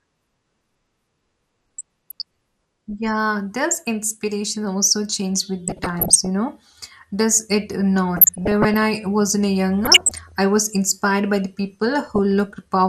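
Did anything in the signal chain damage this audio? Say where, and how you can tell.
Yes. Throughout the clip the speech is dull and gurgly, with upper bands flickering in and out and a granular edge on what remains. That is likely MP2 compression at the codec stage, starved of bits at a rate around 80 kbps. A plain low-pass filter would not flicker or add grit.

DAB burbling, from the reception stage, appears at 1.78–2.22, 5.68–6.27, 8.16–8.86, 9.85–10.32 and 12.07–12.19 s as short blips of noise in single sub-bands. Bit errors are slipping past error correction and corrupting samples in the MP2 audio data. Packet loss would cause gaps, not these blips.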